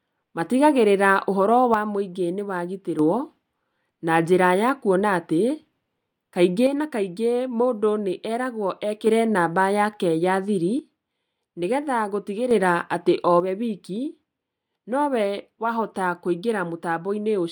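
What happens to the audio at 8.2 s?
At 8.2 s the speech sits inside a span where one channel drops out, running from 6.67 to 9.07 s. The level falls abruptly by about 6 dB at the start and jumps back at the end. The likely cause is one stereo channel going silent. When the two channels are summed to mono, sound common to both loses half its contribution. Anything carried only by the missing side vanishes for those 2.4 seconds.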